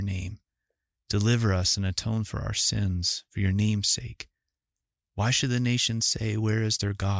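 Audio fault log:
Nothing stood out on listening to the speech in this recording.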